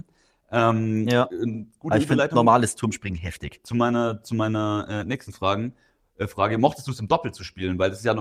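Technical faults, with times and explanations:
Throughout: clock drift between sender and receiver. The sender's clock runs roughly 4 percent fast, so the receiver's jitter buffer keeps filling and has to shed audio. The speech sounds slightly hurried and uneven, and the waveform shows small, irregular splices instead of smooth continuity.
0.01 to 7.84 s: repeated timing corrections. To keep up with the faster sender, the receiver keeps cutting out short pieces, which brings playback to about 104 percent speed. These appear as faint hiccups and an unsteady tempo, with tiny discontinuities and vertical seams on the spectrogram at uneven intervals.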